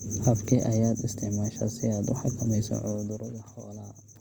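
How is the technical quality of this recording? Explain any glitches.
The recording has two audible technical faults: coding damage that runs through the whole speech clip, and a stepped level drop near the end.

Throughout, the speech sounds rough and grainy, with a noisy texture in place of clean tone. The cause is likely Opus compression in its music (CELT) mode at a low rate, one that fits about 24 kbps. With too few bits, the encoder keeps each band's energy but fills the detail with folded or noise content. The bandwidth stays wide, reaching up to 20.2 kHz, so the speech is not muffled but coarse.

From 2.64 to 3.36 s there is zipper noise. The gain was lowered in 1 dB increments, about 30 per second, with no smoothing between them, for a total drop of roughly 15 dB. Each jump puts a tiny discontinuity in the waveform. Together these produce a fast ticking or zipping that rides on the speech for the whole of the fade.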